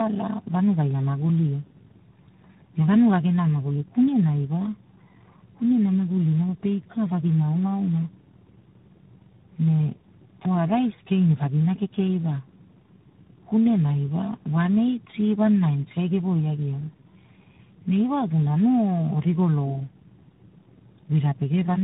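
From start to finish the speech carries tandem speech coding: it has been passed through several low-rate speech coders in a row, with a plain telephone-band link between each, and each stage re-encodes the previous stage's errors. The sound points to three such coders in sequence, likely iLBC, AMR-NB and finally G.726. The result is rough, muffled and warbling. A spectrogram shows nothing above 3.8 kHz, with smeared, wobbling formant bands below.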